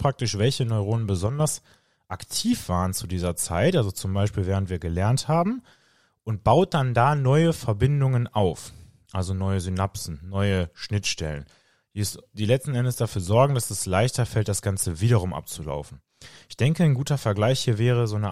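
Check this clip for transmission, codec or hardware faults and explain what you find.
One fault stands out, early in the speech. From 1.27 s to 1.40 s, for roughly 130 ms, the level falls abruptly by about 6 dB and then snaps back, with square edges at both ends. The likely cause is one channel dropping out: with a stereo feed summed to mono, losing one side halves whatever both channels shared. A full dropout would go silent and a gain ride would ramp, but this is a clean half-level step.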